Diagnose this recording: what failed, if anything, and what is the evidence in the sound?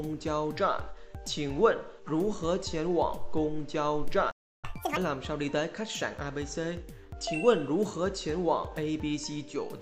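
Playback stall from 4.31 to 4.65 s: sound goes silent for about 320 ms in the playback stage, likely a buffer underrun, then resumes.

Catch-up at higher speed from 4.65 to 4.97 s: player resamples its backlog at double speed, pitch rising about ten semitones, then settling.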